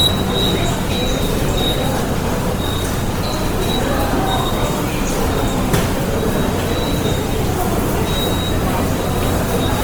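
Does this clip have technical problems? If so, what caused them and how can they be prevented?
Yes. Throughout the clip the audio was likely squeezed through Opus compression in its music (CELT) mode at too few bits, a coarseness that fits roughly 24 kbps. With the budget that tight, the encoder keeps each band's overall energy but substitutes folded copies of lower bands or noise for real detail. The result is plainly audible: tones turn rough, grainy and noisy rather than swirly, even though the band stays full, reaching up to about 20.2 kHz. To prevent it, encode at a higher Opus bitrate, or keep an uncompressed or lossless master.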